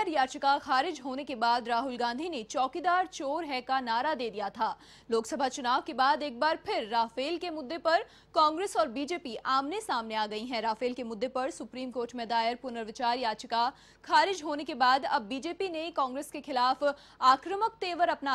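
No technical fault can be heard anywhere in the audio. There are no events to place in time and no cause to point to.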